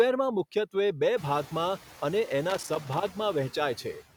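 A worn or dirty contact in the signal path making and breaking intermittently produces loose connector crackle in this speech recording from 2.50 to 3.12 s, chopping the signal into an irregular burst of scratchy crackle. The room noise, which rises by about 20 dB around one second in and sits about 20 dB below the speech, belongs to the recording space rather than the equipment.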